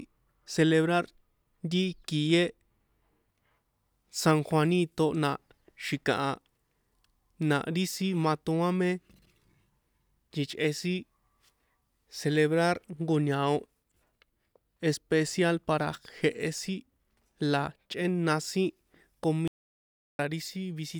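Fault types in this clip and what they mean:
Audio dropout to silence: near the end of this speech clip, from 19.48 to 20.19 s, the sound cuts to silence for about 0.71 s, with no room tone underneath. The likely cause is the input briefly dropping out while the recorder kept writing silence, so whatever was said there is simply gone.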